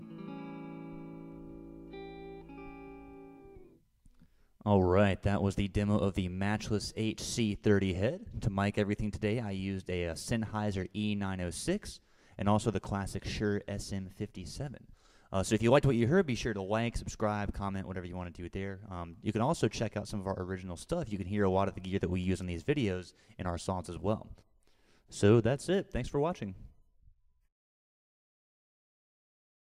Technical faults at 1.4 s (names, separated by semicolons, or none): mains hum